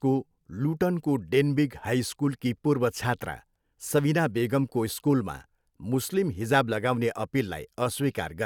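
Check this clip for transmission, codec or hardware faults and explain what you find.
No faults can be heard in the speech, whose signal stays continuous and intact throughout.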